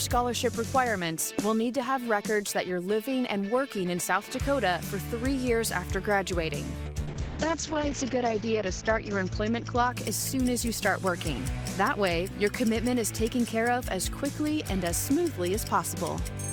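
From 6.87 s to 11.47 s there is a call bitrate drop: the connection's bandwidth estimate collapsed and the encoder was forced to spend far fewer bits, with the sound pointing to a fall from around 48 kbps to roughly 8 kbps. The coding grows coarse and rough, and the audio bandwidth shrinks from 20 kHz to 8 kHz, muffling the top end. The worst stretch lasts about 1.04 s before quality recovers.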